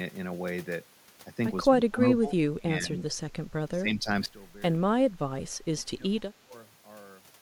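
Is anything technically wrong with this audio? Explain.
Yes. Speech suppressed in double talk at 1.65–2.37, 2.56–3.28, 3.67–4.08, 4.92–5.09 and 5.80–6.53 s: the speech dips by up to roughly 35 dB, likely because an echo canceller attenuated it during simultaneous talk. The waveform shows sudden envelope troughs, and the spectrogram shows faded bands.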